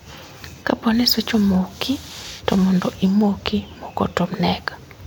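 Three sharp clicks break the speech at 1.42 s, at 2.59 s just before "mondo imoki moko", and at 3.62 s right after "to mondo imoki". Each is a single tick with nothing audibly missing, which points to dropped samples. A handful of samples, around a tenth of a millisecond, has likely vanished from the stream, so the waveform jumps abruptly to a later value. That step makes the click, which shows as a thin vertical line across the spectrum.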